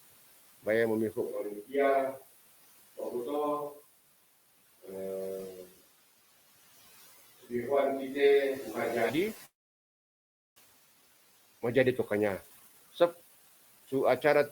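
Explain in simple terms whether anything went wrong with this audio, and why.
Noise suppressor artifacts run through the whole clip. A noise-reduction stage keeps turning down whatever it judges to be steady background hiss, adjusting many times a second. The background noise of the room, which is quiet and not itself a problem, is pushed down strongly between phrases and comes back up underneath the speech.

A switch to a distant microphone happens at 1.23 s, right after "baya mamiho", and lasts until 9.09 s. The speech suddenly sounds hollow and roomy, with less low end, and becomes a little quieter. The likely cause is that the close microphone's signal dropped out and a microphone further away took over. That farther microphone picks up more of the room's echo and less of the speaker directly. At 9.09 s the sound snaps back.

A long network dropout runs from 9.45 s to 10.58 s. For over a second no new audio arrived. 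The player stretched the last bit of sound into a brief fading buzz, and then there is only silence. When sound resumes, roughly 0.6 s of speech is simply gone. The likely cause is a stall in the network connection that delivered the audio.

A jitter buffer speed-up follows from 10.66 s to 13.87 s. After the dropout, audio arrived in a bunch and piled up, leaving the playback lagging. To catch up, the receiver cut out many tiny slices of sound, about half a second in total. That makes the speech play around 15% faster while the pitch stays the same, so this stretch sounds hurried.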